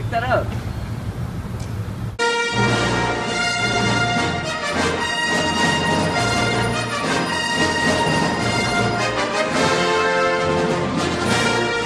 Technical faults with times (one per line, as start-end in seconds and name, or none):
0.00-11.85 MP2 compression